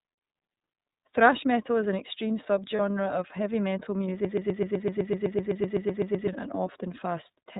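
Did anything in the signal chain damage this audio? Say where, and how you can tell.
Yes. The whole clip has passed through the iLBC codec. Nothing above 4 kHz survives, and the speech has a rough, slightly synthetic texture from excitation coding at a low bitrate, consistent with the 13.33 kbps, 30 ms frame mode. That is coarser and more buzzy than the plain dullness a simple low-pass would leave.

Lost iLBC frames cause a brief held, faintly buzzy vowel from 2.76 to 2.80 s, where the decoder repeats the last pitch cycle to cover the loss. Its length fits a single lost 30 ms frame. Unlike a dropout, there is no silence, and the speech recovers immediately afterwards because each frame decodes independently.

A broken-record loop runs from 4.25 to 6.28 s. A 127 ms fragment repeats exactly, back to back, sixteen times, and the audio that belonged there is gone. Packet-loss concealment would fade and blur, but this repeats identically, so the likely cause is a stalled player or stream resending its last buffer.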